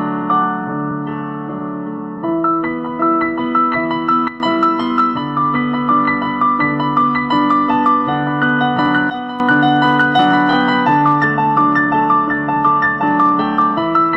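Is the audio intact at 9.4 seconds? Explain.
No. From 9.1 to 9.4 s the level drops abruptly by about 11 dB, with the sound and its background noise falling together in one step instead of fading. This sudden gain jump is likely a digital gain change applied between neighbouring samples without a ramp.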